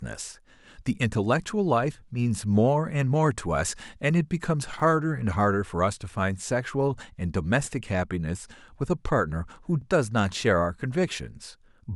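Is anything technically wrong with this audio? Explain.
Yes, there are overlapping chunks. At about 4.80 to 4.82 s and again at 9.82 s, each new 5-second block starts a little before the previous one finished, so roughly 20 ms of speech gets played twice at the join. You hear it as a brief stutter or click.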